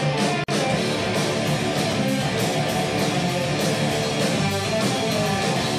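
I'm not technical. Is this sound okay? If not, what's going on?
No. At 0.44 s the sound drops out for about 46 milliseconds, then resumes at 0.48 s. This is a gap at a join of encoded pieces. Two separately compressed parts were stuck together, and the encoder's built-in silence stayed in between.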